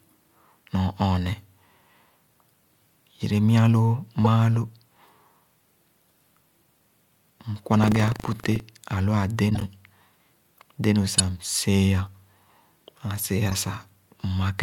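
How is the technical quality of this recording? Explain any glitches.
The recording is marred by two kinds of glitch: damaged codec frames and a stretch of buffer tearing.

Corrupt frame decoded, at 4.24–4.27 s, 9.50–9.63 s, 11.18–11.20 s and 13.49–13.54 s: the decoder played frames with flipped bits, so energy lands at wrong frequencies. Each is a brief chirp or noise blip. The loudest is at 11.18 s.

Buffer tearing, from 7.80 to 8.61 s: writer and playback pointers crossed, splicing a sliver of audio from about a tenth of a second earlier into each 40 ms period. The result is a robotic 25 Hz rattle.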